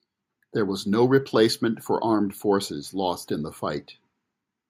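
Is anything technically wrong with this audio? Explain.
No, nothing technically wrong can be heard here.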